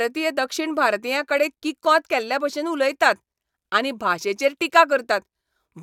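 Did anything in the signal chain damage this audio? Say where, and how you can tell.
No, none of the stages in the chain left any audible damage on this speech recording; the signal holds steady and continuous throughout, with no disturbance anywhere in it.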